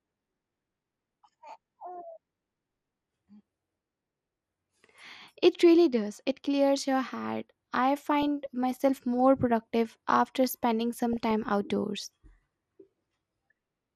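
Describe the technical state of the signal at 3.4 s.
At 3.4 s the speech carries the damage of what is likely MP2 compression, present across the whole clip rather than at that instant alone. Layer II coding divides the signal into 32 sub-bands and rations bits among them; starved of bits, as at a rate near 80 kbps, the upper bands drop out and flicker while the rest are coarsely quantised. The result is plainly audible: dull top end with a gurgling, granular roughness.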